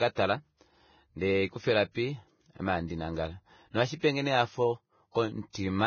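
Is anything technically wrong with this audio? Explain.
Yes. Throughout the speech, likely Vorbis compression at a low bitrate, around 18 kbps, cuts everything above 6.5 kHz and coarsely quantises the treble, leaving it hissy, grainy and dull.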